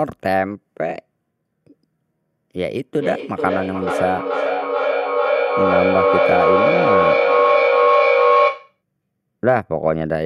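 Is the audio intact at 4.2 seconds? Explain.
No. From 2.76 to 8.81 s there is feedback echo between two devices: a second device in the room replays the call and its microphone returns it, outside either echo canceller's reach. At 4.2 s the sound repeats roughly every 400 ms, repeats building to about 5 dB above the speech.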